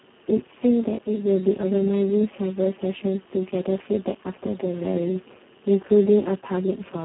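Speex codec damage runs throughout the speech, heavy enough to point to a setting near 4 kbps, where too few bits describe the excitation. Voicing turns hoarse and noisy, within a narrow 150 Hz to 3.4 kHz line band, with nothing above 3.9 kHz.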